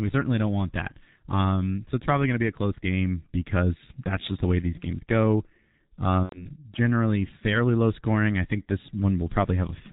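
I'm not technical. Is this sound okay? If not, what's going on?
No. The whole recording went through the G.723.1 codec, an old internet-phone format that squeezes speech very hard and throws away everything above 4 kHz. That is why the voice sounds muffled and hoarse throughout, with consonants smeared together.

From 6.23 to 6.51 s, just before "generally fairly low scoring", there is VoIP packet loss concealed by the speech codec. About 90 ms of audio went missing, and the phone software guessed to fill the gap, so the voice is stretched into a drawn-out sound that fades before recovering.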